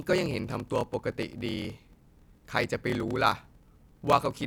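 Throughout, a block size mismatch (padded) leaves zero-filled gaps, fitting 1024-sample blocks, giving a 38.3 Hz buzz and speech slowed to 0.889× with its timbre intact, unlike resampling slowdowns.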